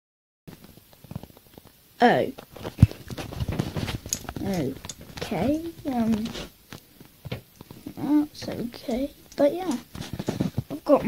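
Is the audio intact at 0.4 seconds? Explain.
No. A cut-off start runs from 0.0 to 0.48 s, so at 0.4 s there is only digital silence. Capture began late and the audio jumps in abruptly at 0.48 s, already partway through a sound. There is no natural onset or fade-in, just dead silence followed by a hard entry, and whatever began before that moment is missing.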